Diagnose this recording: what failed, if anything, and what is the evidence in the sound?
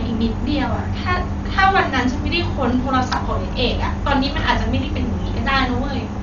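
The speech sounds dull and coarse throughout, with a rough, fluttering noise around voiced sounds. The likely cause is heavy Dolby Digital compression at the codec stage. Short of bits, which fits roughly 40 kbps, the encoder cuts the band and gives many frequency lines no mantissa bits, and the decoder fills them with dither noise.

A single sharp click at 3.16 s shows as a thin vertical line across the spectrum. These are likely dropped samples at the driver or buffer stage. A couple of samples are missing, so the waveform jumps straight to a later value. The gap is far too short to remove audible sound.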